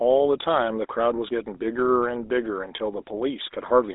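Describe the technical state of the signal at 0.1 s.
At 0.1 s the speech carries GSM full-rate codec coding, present throughout. A coarse pulse-driven vocal-tract model yields buzzy, gravelly roughness, with a 250 Hz to 3.7 kHz band consistent with 13 kbps.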